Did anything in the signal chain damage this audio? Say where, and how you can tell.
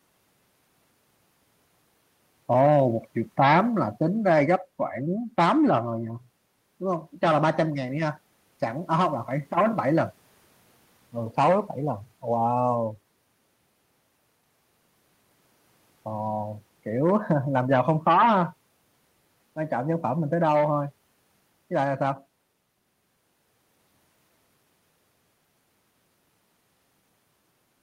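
No, nothing in the signal chain damaged this recording.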